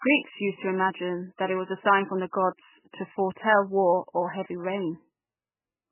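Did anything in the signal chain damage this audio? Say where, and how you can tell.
Yes, and it's at the codec stage, all the way through the clip. The speech has nothing above 3 kHz and a watery, swirly texture, with s sounds reduced to metallic chirps and consonant attacks smeared. That's heavy MP3 compression. The encoder was likely starved of bits, at a rate that fits something around 8 kbps, so it chopped the treble at a fixed cutoff and kept dropping weak frequency lines in and out from frame to frame.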